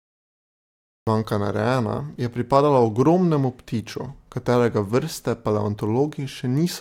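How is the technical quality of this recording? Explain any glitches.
There is one glitch, a cut-off start. From 0 to 1.07 s the audio is digital silence, then speech begins abruptly mid-sound with no natural onset, because capture started late.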